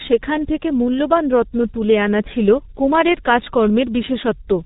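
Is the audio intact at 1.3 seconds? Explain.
No. At 1.3 s, as across the whole clip, the speech has passed through a G.723.1 codec. A low bitrate, consistent with about 6.3 kbit/s, and a slowly updated voice model degrade the speech, and nothing above 3.8 kHz passes. The speech sounds heavily muffled and hoarse, with smeared consonants.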